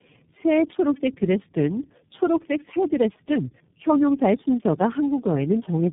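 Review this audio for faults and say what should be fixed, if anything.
Tandem speech coding runs through the whole clip. The speech is rough, muffled and warbly, with nothing above 3.8 kHz. That points to about four speech codecs in a row, each re-encoding the previous one's decoded, already degraded output.

To prevent it, negotiate a single codec end to end, or use transcoder-free operation so the speech is encoded only once.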